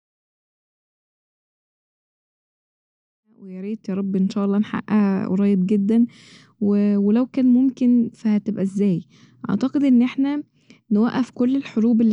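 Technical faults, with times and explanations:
No technical faults are audible in this speech clip, so there are no times or explanations to give.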